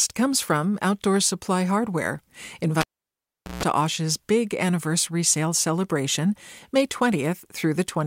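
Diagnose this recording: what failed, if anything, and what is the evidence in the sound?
The fault is in the analogue wiring: a cable pulled and plugged in while live. At 2.81 s a pop cuts the speech, and the signal drops to near silence for about 0.78 s. Then a 60 Hz mains buzz lasts about 0.15 s. That is the plug tip touching the socket before the ground and signal contacts seat. A second pop at 3.63 s marks full contact, and the speech returns.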